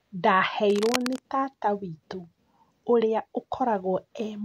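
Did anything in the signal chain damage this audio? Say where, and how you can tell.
Yes. From 0.70 to 1.19 s, just before "tata witũ", the speech is overlaid by a dense, uneven scratching and rustling, roughly 10 dB below the signal, which is cable scratch noise. The stage is the analogue wiring, most likely a worn cable, connector or control being moved so that its contact resistance fluctuates quickly. On a waveform this shows as ragged, spiky bursts riding on the speech, and on a spectrogram as irregular broadband vertical smears across that half-second.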